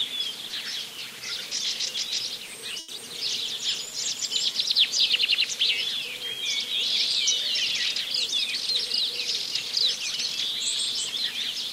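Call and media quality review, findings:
Short stall from a late packet, 2.79 to 2.90 s. Jitter buffer ran dry when a packet arrived late, so the receiver held the last sound for about 90 ms and then resumed at the same point. Nothing is lost, but one sound drags on too long with a faint buzz or dip. Playout delay rises by 90 ms.

Short concealed packet loss, 2.96 to 2.99 s. About 40 ms of audio missed the decoder deadline. Concealment filled the gap with roughly 10 ms of extrapolated sound and cross-faded back into real audio, so a brief smear or wobble replaces the lost stretch. Delay drops by roughly 30 ms as the buffer skips ahead.

Jitter buffer slow-down, 3.60 to 4.54 s. The buffer rebuilt its reserve by repeating single pitch periods and slivers of pause, adding 37 ms across this span. Playback runs at 97% speed at unchanged pitch, so the sound is slightly drawn out, with a possible mild warble.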